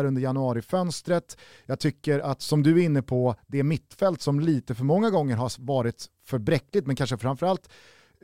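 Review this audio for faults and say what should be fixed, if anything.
No faults can be heard in the speech, so nothing needs to be fixed.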